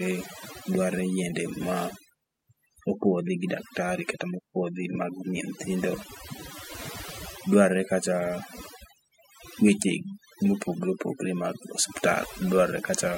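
Overdone noise removal runs through the whole recording. A noise reduction process was pushed too hard, so any frequency band sitting close to its idea of the noise floor gets pulled far down or shut off entirely, and the quieter parts of the speech are removed along with the noise. Between phrases the background collapses to near silence scattered with twinkling specks.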